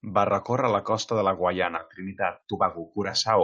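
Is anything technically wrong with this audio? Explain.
Yes, there are two faults.

The first is a skip ahead at about 1.77 to 1.79 s, right after "la costa de la". Roughly 0.7 s of speech is gone, and nothing fills the gap. The receiver had a backlog of audio waiting. It threw away a chunk and jumped straight to newer audio, cutting the delay by about the same 0.7 s. The two sides join almost directly. The sentence seems to lurch forward mid-phrase.

The second is a jitter buffer speed-up from about 1.99 to 3.42 s, running at 114% speed. The buffer was holding more audio than it wanted. To drain it, the receiver cut out many tiny slices, each one or a few pitch periods long. Together they add up to about a fifth of a second. The pitch stays the same, but the speech sounds hurried to the end of the clip.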